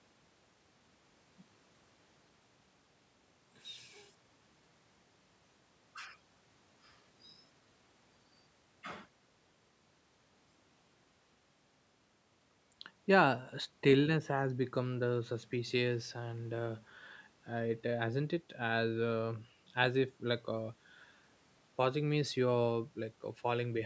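No technical faults can be heard in the speech, which carries the ordinary mark of a call's microphone processing: the lowest bass is trimmed by its high-pass filter and there is nothing above 8 kHz.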